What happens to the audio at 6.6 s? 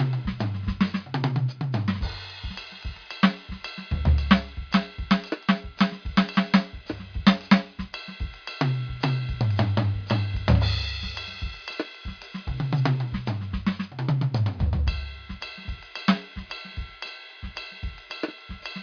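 Nothing goes wrong at 6.6 s: the music plays through that moment intact, with no dropout, click or other fault.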